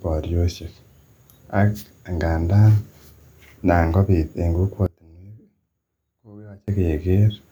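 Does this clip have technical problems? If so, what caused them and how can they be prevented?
Yes. From 4.86 to 6.68 s the speech falls by about 27 dB to a faint residue, then returns. The likely cause is one channel inverted: when the channels are summed to mono, the sound they share cancels. Unlike a dropout or mute, a weak trace of the sound remains. Checking each channel's polarity before any mono fold-down prevents it.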